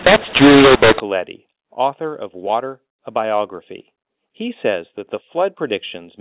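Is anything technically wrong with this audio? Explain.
Yes. From 0.0 to 1.0 s the speech sounds harsh and gritty, with levels jumping unevenly and a hiss lifting the gaps. This is mu-law and A-law mixed up: G.711 telephone samples encoded with mu-law are decoded as A-law, so each sample maps to the wrong amplitude, and near-silent values land well above zero. After 1.0 s the mu-law stream decodes normally.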